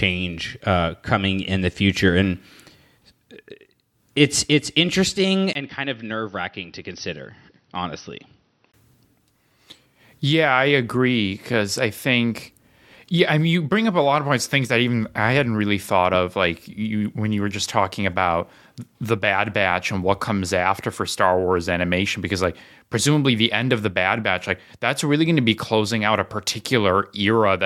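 Input switched to a poorer device, from 5.53 s to 8.74 s, right after "it's it's interesting": a brief gap of about 20 ms, then the speech turns dull and boxy, with nothing above 6 kHz, drops roughly 10 dB in level, and gains a faint new noise floor some 40 dB under the voice. At 8.74 s the full band and level return. The cause is likely the recording input changing mid-take to a narrower-band microphone or headset path and then switching back.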